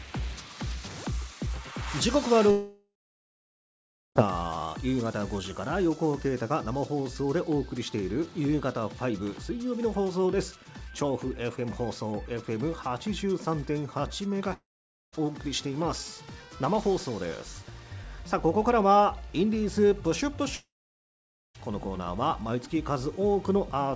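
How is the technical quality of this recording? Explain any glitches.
The recording has three gaps where the sound stops, and the material inside each gap is lost rather than delayed. From 2.51 to 4.18 s, 14.53 to 15.15 s and 20.55 to 21.57 s, the last sound turns into a fading buzz and then falls to silence, for about 1.2 s, 0.5 s and 0.9 s respectively. Audio then resumes later with the missing part gone. This is likely a long network dropout: the receiver had nothing to play, stretched the final sound briefly, then gave up. Throughout, nothing above 8 kHz is present, which fits a wideband call codec such as G.722.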